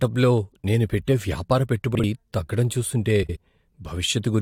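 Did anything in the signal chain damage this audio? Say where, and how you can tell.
Yes, frames out of order, likely a network fault. At 1.94–2.04 s, after "నేను పెట్టే వ్యాపార", and 3.22–3.37 s, after "తగ్గడం చూస్తుంటే", adjacent 43 ms and 64 ms blocks play swapped, giving a garbled flutter.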